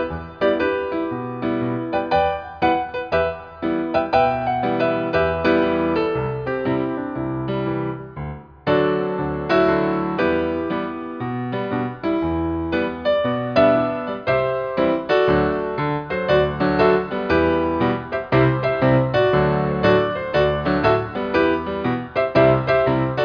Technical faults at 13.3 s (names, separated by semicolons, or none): none